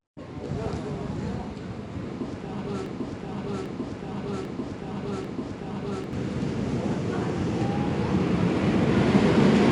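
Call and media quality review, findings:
4-bit ADPCM compression, full length: gritty broadband hiss riding on every loud passage and dropping away in quiet ones, roughness on sharp attacks, nothing above 10.7 kHz. Codec: 4-bit step-from-prediction coding; error scales with level. The top cutoff fits a roughly 22 kHz sample rate. Unlike perceptual-codec swirl or pre-echo, this is steady, signal-following noise.

Broken-record loop, 2.86 to 6.13 s: a 0.79 s fragment repeats exactly 4 times back to back, and the audio due in that span never plays. Likely cause is a player, encoder or stream stall resending its last buffer. Unlike echo or reverb, the repeats are identical and don't decay.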